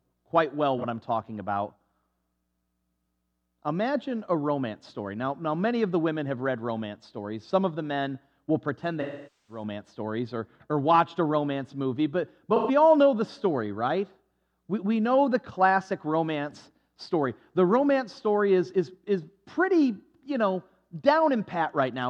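AAC frame loss with concealment hits at 0.78 s, 9.01 to 9.63 s and 12.55 to 12.71 s. The decoder fills each gap from the previous spectrum, so instead of hard silence you hear a smeared, phasey patch, and the long half-second loss fades away and back in.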